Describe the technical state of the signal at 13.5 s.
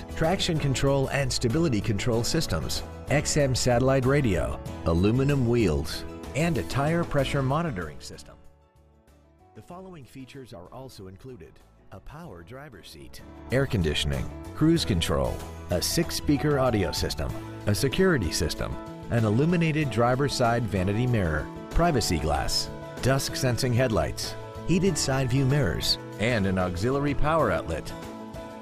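Zipper noise, 12.91 to 13.56 s: a level change of around 20 dB moves in unsmoothed 3 dB steps, about ten a second, each one ticking audibly.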